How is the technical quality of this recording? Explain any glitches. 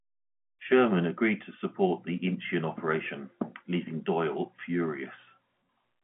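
No faults turn up here; the speech simply carries the sound of G.711 telephone coding, with the usual phone-line band of 150 Hz to 3.4 kHz and nothing above 3.7 kHz.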